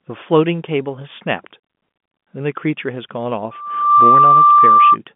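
At 3.51 s a loudspeaker feedback squeal kicks in: the mic is catching its own speaker, and a 1.2 kHz tone swells over about half a second to sit roughly 10 dB above the speech on the band-limited telephone line, howling until 4.97 s.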